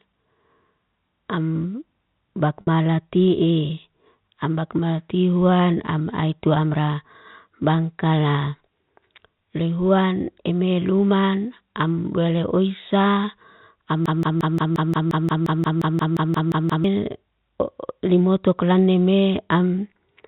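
At 2.61 s the speech briefly holds a slightly buzzy, sustained tone for about 60 ms before resuming. That is packet loss with pitch repetition: the receiver bridged the missing audio, which fits two 30 ms packets, by repeating the last pitch period.

From 14.06 s to 16.84 s a 176 ms fragment repeats exactly, back to back, about sixteen times, and the speech meant for that span never arrives. This broken-record loop was likely caused by a stalled player or stream resending its last buffered piece.

Throughout, the G.711 telephone coding keeps everything below 4 kHz.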